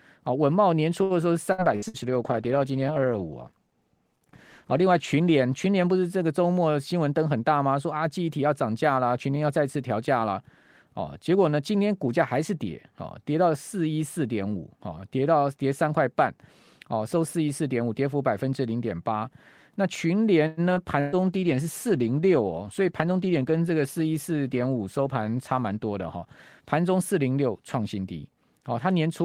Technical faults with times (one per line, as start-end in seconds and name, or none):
1.03-1.97 repeated packet loss (robotic sound)
1.58-6.02 call bitrate drop
6.93-7.59 jitter buffer speed-up
20.47-20.60 call audio freeze
20.75-20.79 skip ahead
21.00-21.22 burst of packet loss
21.15-27.25 call bitrate drop
22.55-23.37 jitter buffer speed-up